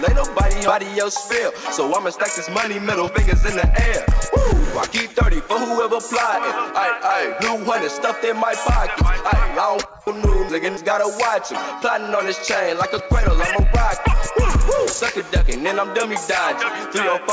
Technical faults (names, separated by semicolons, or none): skip ahead; jitter buffer speed-up